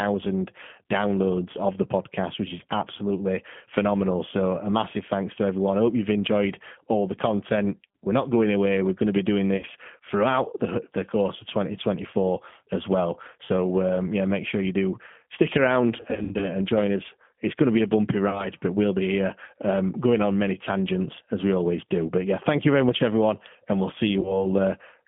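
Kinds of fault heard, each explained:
G.729 codec: The speech passes through an 8 kbit/s low-rate voice codec. It is confined to about 150 Hz to 3.4 kHz and sounds plainly rough and synthetic throughout.
VoIP packet loss concealed by the speech codec: Lost packets are patched by extrapolating the last sound into a fading buzz. It is worst after "you do stick around", around 16.0 to 16.5 s.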